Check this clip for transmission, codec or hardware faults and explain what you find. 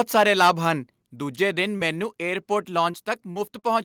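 Yes, there are a few faults worth flagging, mostly hardware-side at the start and network-side toward the end.

From 0.0 to 0.5 s, just before "ਹਨ ਦੂਜੇ", you'll hear microphone overload. The input was likely set too hot, driving peaks about 7 dB past the converter's ceiling and flattening a few percent of samples into a crackly, harsh edge.

At 1.02 s and again at 3.06 s, the microphone volume steps down, by about 4 dB and then about 3 dB. That's likely the call software's gain control reacting to the loud input. Voice and background both drop abruptly.

Short concealed packet loss shows up four times. There are 20 ms gaps at 1.77 to 1.81 s and 2.91 to 2.95 s, and 40 ms gaps at 3.31 to 3.37 s and 3.59 to 3.65 s. The receiver patched each hole by extending the preceding sound, so you get brief smears or wobbles.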